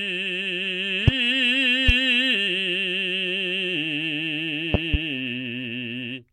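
Loud pops at 1.08–1.11 s, 1.89–1.92 s, and a double pop at 4.74–4.97 s, about 20 dB above the music: likely sudden voltage spikes, with the music continuing underneath.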